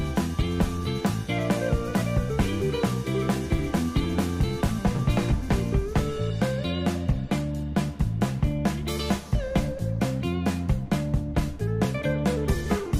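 The audio carries no technical faults: the signal runs continuously, with no breaks, level problems or added disturbances anywhere in it.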